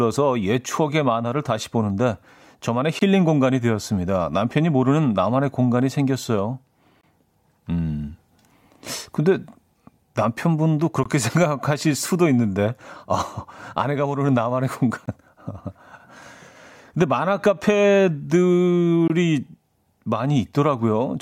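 Speech with a gap between chunks: hard-edged silences of about 21 ms at 2.99, 7.01, 11.03, 15.06 and 19.08 s, about 4 s apart. That fits codec padding. Unlike dropouts, nothing is lost; the sound resumes exactly where it stopped.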